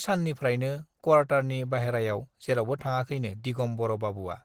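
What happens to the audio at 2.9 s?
Opus compression is audible at 2.9 s and throughout the clip. The damage is plain: the speech sounds muffled and hoarse, with a rough, grainy edge in the upper range. This likely comes from a low-rate encode, which fits about 16 kbps, where the encoder uses its hybrid mode. It codes the lower band as speech and fills the thinly budgeted higher bands with folded or noise-like energy instead of real detail.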